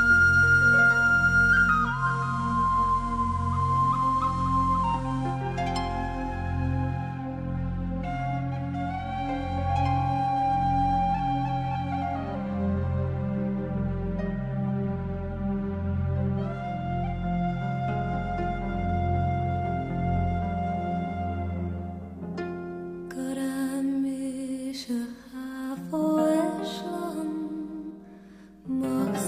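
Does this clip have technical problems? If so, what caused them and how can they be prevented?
Yes. From 1.88 s to 5.47 s there is digital radio blending to analogue. The receiver lost the digital stream and cross-faded to the station's FM broadcast, then back. Each blend takes about 170 ms. A steady hiss appears, roughly 30 dB below the sound. The level stays the same across both blends. Better antenna placement or a stronger signal would keep the receiver on digital.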